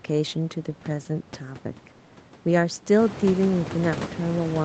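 No technical faults can be heard in this speech recording. The room background noise swells by about 15 dB around 3 s but stays roughly 12 dB beneath the speech, and the call path's band limit leaves nothing above 8 kHz.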